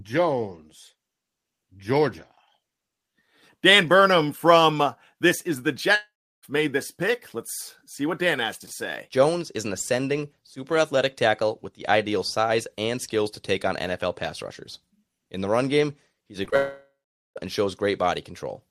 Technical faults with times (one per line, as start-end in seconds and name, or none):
5.95-6.45 long network dropout
16.45-16.54 short concealed packet loss
16.56-17.38 long network dropout